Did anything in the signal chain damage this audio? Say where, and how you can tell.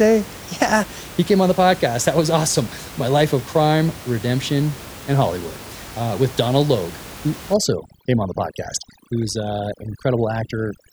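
Yes. From 7.54 s to the end of the clip at 10.93 s, the speech shows overdone noise removal, a call-processing fault. The room noise, sitting about 17 dB below the speech, collapses to near silence scattered with twinkling specks. A noise suppressor set far too aggressively is muting individual frequency bands wherever they come close to its noise estimate, and it strips the quieter parts of the speech along with the background.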